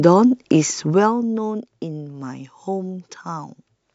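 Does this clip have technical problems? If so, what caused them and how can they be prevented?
Yes. Zipper noise from 0.86 to 1.25 s: the level drops about 10 dB in unsmoothed steps, roughly 200 per second, each adding a faint tick. Prevent it by ramping gain per sample rather than per block.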